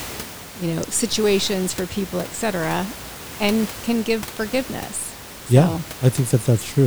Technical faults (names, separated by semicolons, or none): none